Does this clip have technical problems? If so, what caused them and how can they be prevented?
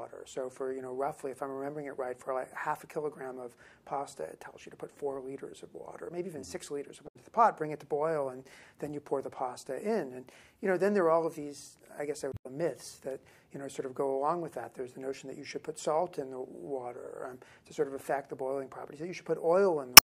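Yes, there's damaged data in a compressed stream at 7.04 to 7.16 s, 12.29 to 12.46 s, and 19.94 to 20.07 s. Bad bytes in the file knocked the decoder off its frames, so it misread or dropped them while searching for the next valid header. Checksummed transfers and verified copies would catch this before playback.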